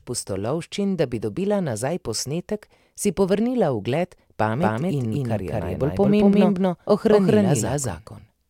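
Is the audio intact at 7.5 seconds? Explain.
No. From 4.62 s, just after "posnetek si povrnila ugled", to the end, a doubled audio track trails the speech by about a fifth of a second at equal loudness, likely from an out-of-step second capture.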